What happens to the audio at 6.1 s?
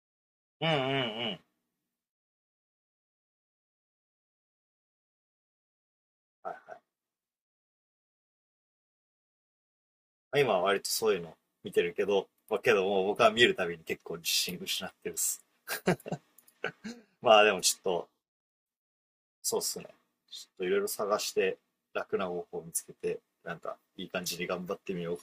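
Nothing goes wrong at 6.1 s; the speech carries on intact through that moment, with no dropout, click or distortion.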